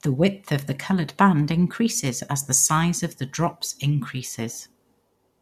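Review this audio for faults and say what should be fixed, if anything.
Nothing to fix: no audible faults anywhere in the speech, so no corrective action is needed.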